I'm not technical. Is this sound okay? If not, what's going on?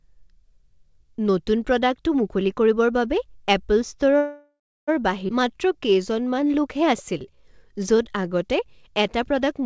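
No, there are three separate glitches, all from about four seconds into this speech recording onward.

From 4.18 to 4.90 s there's a call audio freeze. The sound stalls for about 0.7 s: the last bit of sound gets stretched out as a fading buzzy tail, then about 0.3 s of near silence. The likely cause is that the data carrying the audio got held up on its way across the network, so the receiving end ran out of sound to play and improvised until it arrived. Nothing is lost, but a pause is inserted.

At 5.28 to 5.31 s there's a skip ahead. Playback suddenly jumps forward, with roughly a third of a second of speech simply gone and the two sides stitched together almost directly. This happens when the receiver has built up a backlog and throws some audio away to catch up. The cut is abrupt rather than a gap.

From 5.39 to 8.30 s there's a jitter buffer slow-down. For about three seconds the speech plays at around 89% speed, adding about a third of a second overall, while the pitch stays the same. 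The receiver does this by repeating tiny slices of sound over and over to rebuild a safety reserve of audio. The result is drawn-out sounds.

The whole thing also went through a standard call codec that drops everything above 8 kHz.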